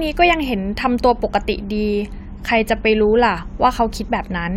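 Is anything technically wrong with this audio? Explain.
No technical faults are present.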